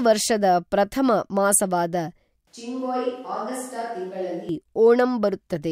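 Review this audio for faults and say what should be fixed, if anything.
From 2.47 to 4.49 s the speech abruptly turns hollow and roomy, about 10 dB quieter with thinner bass and noise roughly 35 dB below it, likely a switch to a distant microphone. The waveform shrinks sharply, and the spectrogram loses low-end energy while haze fills the pauses. To prevent it, monitor the close microphone's feed and keep a backup recorder running on it so a dropout never forces the camera track into the edit.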